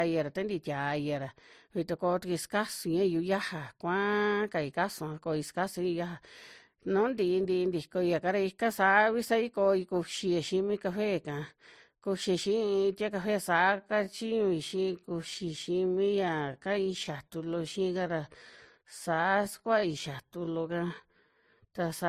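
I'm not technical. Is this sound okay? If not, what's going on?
No. Throughout the clip there is transcoding between lossy codecs: the speech was likely compressed as MP3 and then compressed again as Opus. Each round of compression discards detail, so the fizzy and smeared traces from both are heard layered together.

From 13.72 s to the end there is a time-stretched section, starting just before "skua'a ti café". The speech slows abruptly to about two-thirds of its pace while the pitch stays the same, which makes it drag. The likely cause is software stretching it to fill a set length.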